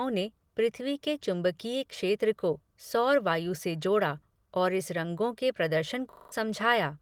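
System hang loop, 6.12 to 6.32 s: a frozen system left the hardware replaying one 40 ms buffer five times, heard as a 25 Hz buzz.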